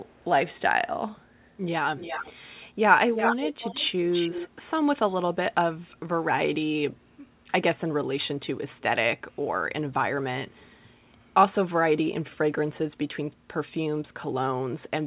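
A faint delayed copy of the speech trails it from 0.05 to 0.26 s, about 0.42 s behind and barely audible. It is louder from 1.97 to 2.33 s and nearly as loud as the speech from 3.15 to 4.49 s, 0.35 s behind. This is likely an echo leak, where a loudspeaker's echo canceller let the sound through.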